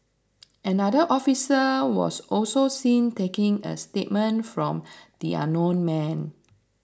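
Nothing here trips any alarms: no dropouts, glitches, clicks or other technical faults turn up anywhere in the recording.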